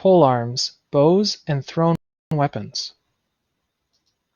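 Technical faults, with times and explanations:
1.95–2.31 s, rebuffering stall: the speech drops to silence for about 0.36 s, then picks up exactly where it broke off, with nothing missing. The player ran out of downloaded audio and paused until more data arrived, so time is added rather than sound lost.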